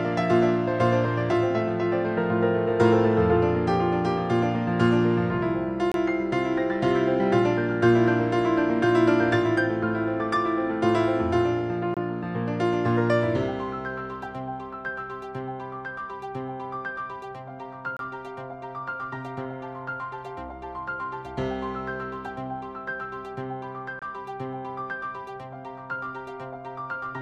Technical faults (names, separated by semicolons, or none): gap between chunks